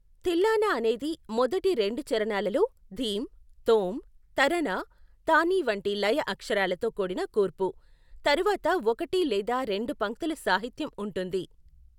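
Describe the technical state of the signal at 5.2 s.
At 5.2 s the speech signal is intact, with no audible fault at that moment.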